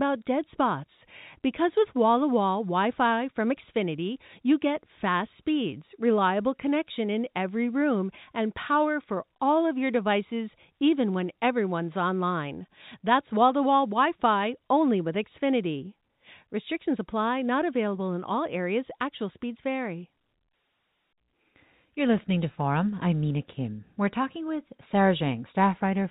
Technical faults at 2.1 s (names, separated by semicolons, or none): none